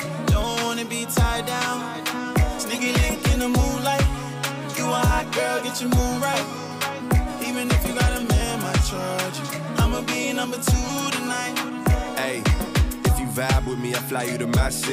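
A single tiny click at 0.42 s, too brief to register as a stutter. It is a repeated buffer: new audio arrived late, so the last short block played a second time with a hard join, which fits a 64-sample buffer of 1.33 ms.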